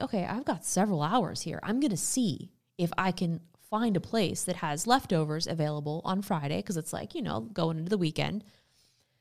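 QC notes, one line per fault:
4.82 s and 7.46 s, dropped samples: two single sharp clicks in the speech, the first right after "find a place that" and before "leftovers available on", the second after "it's like you know" just ahead of "going into the". Each time the waveform jumps because a handful of samples, well under a millisecond's worth, went missing, likely from a buffer hiccup. Nothing audible is lost, but the step makes a thin broadband tick you'd see as a vertical line in the spectrogram.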